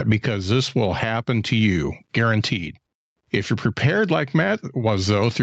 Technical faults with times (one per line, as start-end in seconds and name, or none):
0.00-5.43 gain pumping